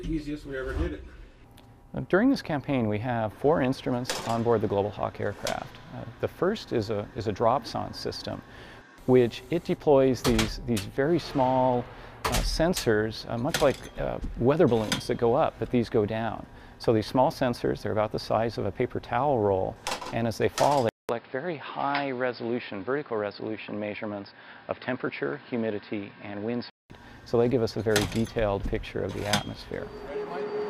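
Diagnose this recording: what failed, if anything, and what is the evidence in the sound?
From 20.89 s to 26.90 s, nothing reaches above 5.2 kHz and the level falls by around 5 dB. A new noise floor sits roughly 30 dB down, and a 200 ms silence marks the switch, which likely means the input switched to a poorer device at the driver level. The silence, level step and changed noise set this apart from a codec bandwidth drop.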